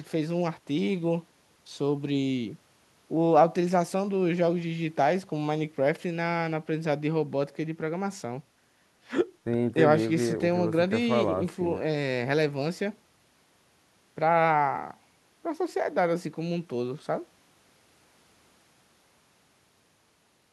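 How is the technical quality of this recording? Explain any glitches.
The recording shows no technical glitches: the signal stays continuous and stable throughout.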